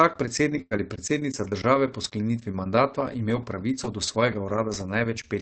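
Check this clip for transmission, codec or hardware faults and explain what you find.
Two transmission faults occur close together early in this speech clip, both shortly after the half-second mark. The audio is band-limited at 8 kHz by the call codec, whose coding noise fits Opus at around 24 kbps.

From 0.61 to 0.74 s the sound stalls into a held, fading continuation of what came just before, then picks up further along with a piece missing. This is a burst of packet loss. About 94 ms was covered by the receiver extending and attenuating the last audio, while about 60 ms of the original never arrives. The jump back in also shifts the timing by about 34 ms.

From 0.71 to 0.77 s, overlapping the end of that gap, about 60 ms sounds rougher and noisier than the surrounding speech but has no hole in it. This is a lost packet rebuilt from error correction. The packet after the missing one carried a low-bitrate duplicate, Opus in-band forward error correction, and the decoder played that coarser copy in place of the original.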